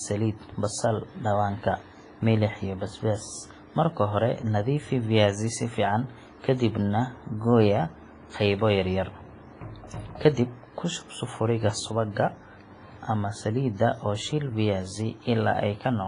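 Throughout the speech, heavy WMA compression damage is audible: ringing, washy texture and hiss that breathes with the signal, fitting a low-rate stream around 24 kbps. A spectrogram shows a hard ceiling at 10.3 kHz, with weak components blanked into holes. The likely cause is a transform codec smearing quantisation noise across long blocks.

From 11.61 to 11.80 s there is a sudden gain jump of about 4 dB. Speech and background noise step up together, likely because the digital gain changed between adjacent samples without a ramp. On a waveform the envelope shows abrupt square steps at both edges.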